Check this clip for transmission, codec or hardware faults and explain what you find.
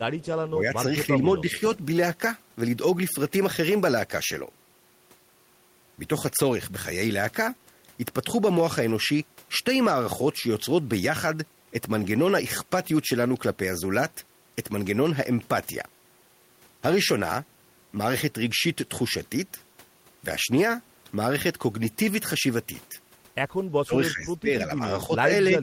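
Two kinds of fault are present: a brief echo leak near the start and several moments of speech suppressed in double talk.

From 0.21 to 0.25 s there is an echo leak. A faint, delayed copy of the speech comes back about 0.3 s after the original, roughly 30 dB below it. The likely cause is a far-end loudspeaker whose echo canceller left some residue. That residue was sent back down the line. It is heard only as a short scrap.

Speech suppressed in double talk occurs at 0.51 to 0.83 s, 1.4 to 1.58 s, 23.7 to 24.5 s and 24.79 to 25.29 s. The likely cause is an echo canceller that could not tell its own talker from loudspeaker echo while both sides spoke, so it turned the speech down. The first two dips are slight, around 5 dB. The last is moderate, about 10 dB. The one near 24 s is deep, about 25 dB, and nearly cuts the speech out for most of a second.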